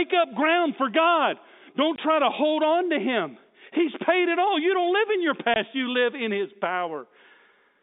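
Two stretches of packet loss filled with silence interrupt this speech recording, at 1.96 to 1.98 s and 5.54 to 5.56 s. Each time the receiver had nothing to play and inserted pure silence. Each 20 ms gap fits a single lost packet at that frame size. The speech is abruptly chopped, with hard edges where the sound drops out and resumes. All of this sits within the narrow telephone band of G.711 coding, which tops out near 3.7 kHz.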